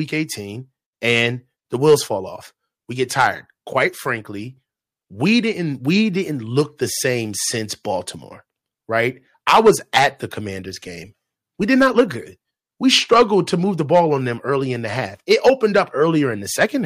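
Speech, hard clipped throughout: the signal is driven about 5 dB past full scale, so a small fraction of peaks are cut flat, producing brief crackle on louder syllables.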